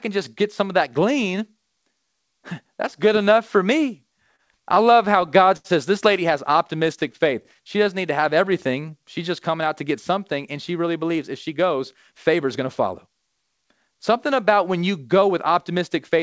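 It's a speech clip that's come through a call path, so there's nothing above 8 kHz (which fits a wideband codec like G.722), and it has four timing problems. First, repeated stalls (stutter) from 4.36 to 5.66 s, right after "good enough for me": seven little hold-ups where the last sound gets stretched, 152 ms in total and the longest 77 ms, so nothing's lost but it drags. Then scattered short gaps from 6.57 to 7.57 s, starting after "says this lady has": around seven tiny patches, roughly 50 ms in all with the longest about 10 ms, heard as brief ticks and smears where late packets got papered over. Overlapping that, a jitter buffer slow-down runs from 7.24 to 8.99 s, with the receiver repeating pitch periods to rebuild its reserve, so the speech plays at 92% speed, about 140 ms longer, at unchanged pitch. Finally a jitter buffer speed-up from 10.96 to 13.95 s, after "something and she really": the buffer had too much queued, so it trimmed around 0.2 s of short slices and the talking runs about 107% speed, a bit hurried but same pitch.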